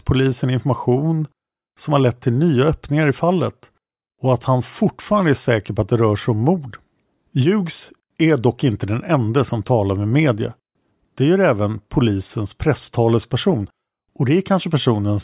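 A speech recording with no audible technical faults anywhere in it.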